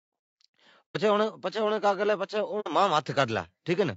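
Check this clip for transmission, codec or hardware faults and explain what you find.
Two faults: constant codec damage throughout, and two brief muted gaps.

Low-delay AAC compression runs through the whole speech clip. The likely cause is AAC-ELD, the low-delay codec of video calls, at a bitrate around 32 kbps. Its short frames cannot separate the pitch harmonics finely and leave few bits for detail. The result is plainly audible: the voice sounds rough and grainy, noise fills the spaces between harmonics, and the top band sounds dull or synthetic.

AAC frame loss with muting occurs from 0.91 to 0.96 s and again from 2.60 to 2.68 s. Compressed frames went missing, and the decoder replaced their spectrum with silence. The gaps point to about three and two lost frames respectively. Because the decoder's overlapping windows blend into and out of the silence, each dropout sounds like a soft-edged hole in the speech.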